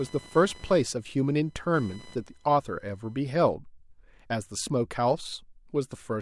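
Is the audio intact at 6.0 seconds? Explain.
Yes, the speech at 6.0 seconds is intact, with no audible fault at that moment.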